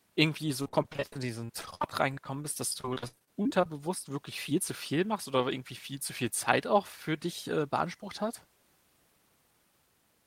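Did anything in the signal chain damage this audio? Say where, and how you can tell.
Yes, network stage: repeated packet loss (robotic sound) from 0.62 to 3.66 s. Frequent gaps up to 60 ms are patched by extending earlier speech, leaving choppy fragments.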